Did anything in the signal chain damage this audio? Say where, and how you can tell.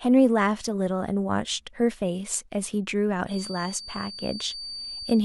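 Yes. A loudspeaker-to-microphone loop was likely sitting at the edge of feedback, so from 3.25 s to the end a thin, single-pitch 4.6 kHz feedback whistle sits well below the speech.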